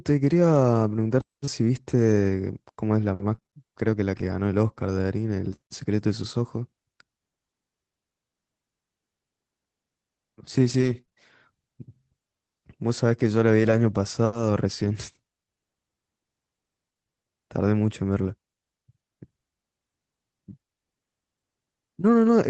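From 1.45 to 5.59 s, scattered short gaps appear: about seven brief losses, none longer than roughly 30 ms, each patched by stretching the preceding sound, so the speech picks up small ticks and smeared hiccups. A second, sparser run of about three even shorter gaps follows from 10.49 to 14.89 s. On a spectrogram each patch shows as a brief frozen or repeated slice of harmonics. The waveform shows a tiny discontinuity at each join, all beneath a band limit near 8 kHz typical of an Opus call.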